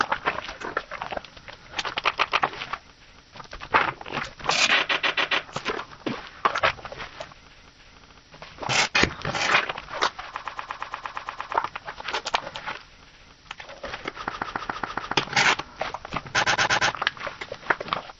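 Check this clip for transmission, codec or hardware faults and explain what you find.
The clip has one fault type, repeated frames, occurring six times: at 2.13–2.40 s, 4.89–5.45 s, 8.00–8.21 s, 10.37–11.53 s, 14.29–15.13 s and 16.43–16.89 s. A short block of compressed audio, about 70 to 140 ms long, is decoded again two to ten times in a row, producing an audible stutter. Each event lengthens the audio by the repeated time, up to about 1.16 s at 10.37 s.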